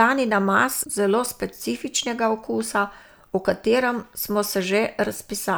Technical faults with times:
none

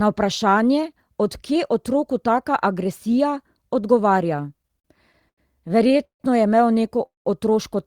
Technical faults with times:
4.37-5.40 repeated stalls (stutter)
5.88-6.22 repeated stalls (stutter)
7.06-7.27 call audio freeze

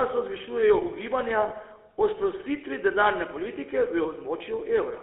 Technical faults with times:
0.00-5.02 GSM full-rate codec
1.48-1.51 lost GSM frames
4.38-4.41 lost GSM frames

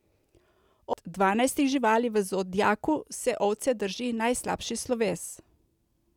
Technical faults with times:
0.93 CD skip

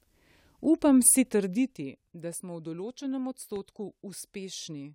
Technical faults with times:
1.27-2.03 zipper noise
3.56-3.58 loud pop

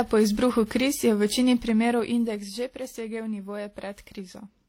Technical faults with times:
0.00-4.68 transcoding between lossy codecs
1.46-2.86 zipper noise

